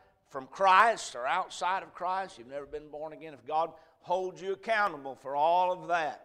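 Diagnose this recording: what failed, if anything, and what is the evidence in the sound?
Five single sharp clicks sound at 0.80, 2.01, 3.17, 4.87 and 5.74 s. Each is a brief jump in the waveform. No sound is audibly missing. The likely cause is dropped samples at the driver or buffer stage, each losing a tiny fraction of a millisecond.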